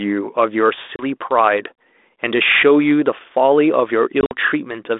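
Packet loss on an ADPCM call hits at 0.96 to 1.05 s, dropping 30 ms, then at 4.21 to 4.34 s, dropping 70 ms over 100 ms. Sharp silent gaps follow. The decoder's predictor then loses step, so speech returns with brief distortion.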